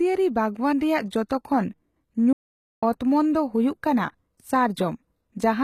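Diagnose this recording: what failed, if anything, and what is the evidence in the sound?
The codec stage is the weak point. The treble is rebuilt from copies of lower bands rather than carried. That points to HE-AAC compression at a low bitrate, likely somewhere around 20 kbps. Because the upper band is synthesised, its harmonics don't line up with those below the crossover. Sibilants come out gritty, metallic and lisped, and the codec damage is plainly audible across the whole speech clip.

A playback stall interrupts the output at the player or buffer stage. At 2.33 s the speech cuts out mid-flow and the output stays silent until 2.83 s, a gap of about half a second (roughly 496 ms). It then resumes. That pattern fits a player that was likely starved of data or had its audio thread blocked, leaving the output to sit idle until the buffer refilled.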